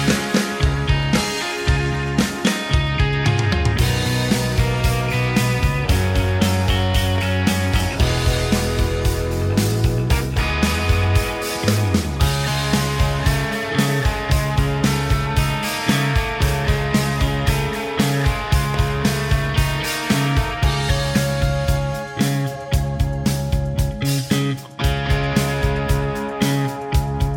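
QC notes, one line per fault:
7.18–7.20 s and 18.74–18.76 s, loud pop: two single sharp pops, each about 20 ms long, the first peaking around 5 dB above the surrounding sound and the second around 10 dB, with the sound continuing underneath. Each is likely a brief voltage step from a switch, plug or static discharge.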